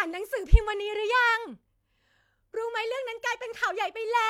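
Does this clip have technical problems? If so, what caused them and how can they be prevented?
No, no technical problems heard.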